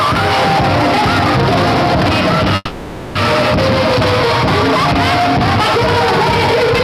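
At 2.55 s the audio stops progressing and the last sound is stretched into a buzzy, fading continuation for about 620 ms, followed by a near-silent gap of about 20 ms before normal sound resumes at 3.19 s. About 400 ms of material never returns, and playback lands roughly a fifth of a second later than before. This is likely a long network dropout. A spectrogram shows smeared, repeating bands thinning out, and the waveform shrinks before the clean restart.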